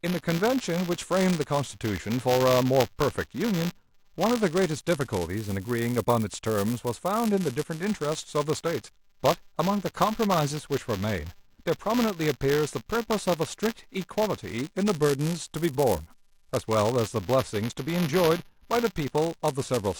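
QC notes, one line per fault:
Throughout, buffer tearing: a steady robotic rattle at 200 Hz rides on the speech and drops away in the pauses. The write and read positions in the playback ring buffer have slipped and cross inside every period. As a result, a small sliver of each roughly 5 ms buffer replays audio from about 15 ms earlier, with hard joins on either side. Those two discontinuities, repeating every period, produce the buzz at the buffer rate.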